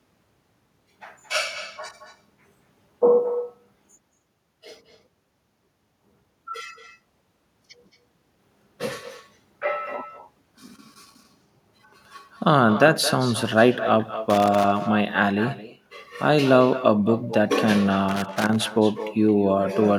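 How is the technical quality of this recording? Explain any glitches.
The technical quality is poor, with two problems: a persistent echo and three bursts of crackle.

Echo with no canceller runs through the whole recording. The far end's loudspeaker output is being picked up by its microphone and sent back uncancelled, so every phrase of the speech returns about a fifth of a second later, around 12 dB quieter and thinner. On a spectrogram each syllable has a faint, duller duplicate trailing just behind it. In the waveform, every burst of energy is followed by a smaller copy.

Loose connector crackle appears at 10.41 to 11.25 s, 14.30 to 14.64 s and 18.09 to 18.76 s. A worn or dirty contact is rapidly making and breaking, which chops the signal, and any DC offset on the line turns each break into a pop. It sounds like irregular scratching and crackling. The waveform shows sharp spikes and brief dropouts in these spans, and the spectrogram shows scattered vertical broadband streaks.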